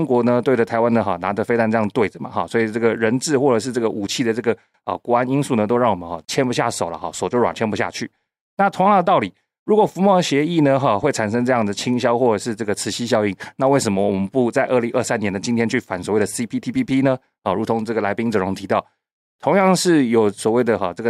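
From 0.24 s to 20.84 s, faint clock slip clicks tick through the speech about every half second. Each is one sample dropped or repeated, likely from two unsynchronised clocks roughly 50 ppm apart. A spectrogram shows evenly spaced faint vertical lines, and the waveform shows tiny steps.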